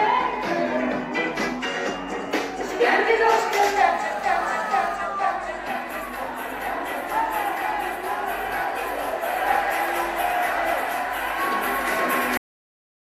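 A hard, raspy buzz with many harmonics sits at about 217 Hz from 3.84 to 4.96 s, steady and about 19 dB below the sound. This is GSM phone buzz from a nearby 2G handset on a call, its radio bursts rectified by the audio circuitry. At 12.37 s the audio stops abruptly mid-sound into digital silence with no decay. This is a cut-off end, where the final buffers were never written.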